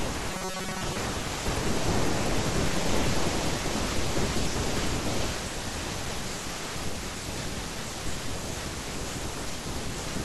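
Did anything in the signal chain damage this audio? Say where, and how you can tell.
Yes. From 0.3 to 0.96 s the speech turns into robotic sound from repeated short buffers. The voice becomes a rigid, metallic buzz near 188 Hz. It still tracks the words loosely. That fixed pitch matches a segment of about 5.3 ms being replayed over and over. Roughly 70% of the real audio in that span is skipped. The likely stage is the driver or buffer, starved of new audio and looping its last block.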